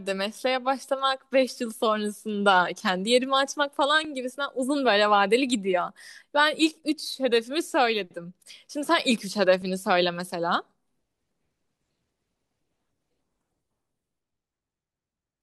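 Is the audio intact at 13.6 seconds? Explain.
No. The speech around 13.6 seconds falls inside a stretch from 1.26 to 15.18 s where a click or pop recurs every 2.78 s, about seven times in all. This regular ticking pattern is clock drift buffer slips. The likely cause is two devices running on separate clocks that disagree by roughly 400 parts per million, so the buffer between them drifts until a block of around 50 samples is dropped or repeated, leaving a click each time.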